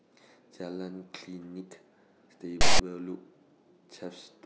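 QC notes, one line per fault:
2.61–2.79 s, file tags played as audio: a hard-edged burst of loud rasp lasting about 0.18 s, where text metadata was decoded as samples. Its lopsided, offset-to-one-side buzz sets it apart from full-scale white noise from compressed data or simple clipping.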